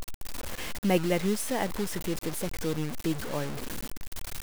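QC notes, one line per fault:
Throughout: low bit depth without dither. The speech carries a grainy, gritty distortion that shifts with every syllable, with the error sitting only about 10 dB below the signal. Quiet tails sputter or drop out, likely from truncation to about 5 bits with no dither.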